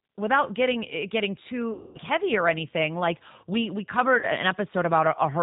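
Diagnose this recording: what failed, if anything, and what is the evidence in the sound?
Rough, synthetic speech with nothing above 4 kHz throughout: codec stage, G.729 at 8 kbit/s, rebuilding speech from a vocal tract filter, pitch predictor and sparse pulses.

Stretched, fading sound at 1.73–1.98 s, between "getting eh getting too" and "heavy", and at 4.19–4.27 s after "we we": network packet loss, concealed by the speech codec extrapolating its last frames.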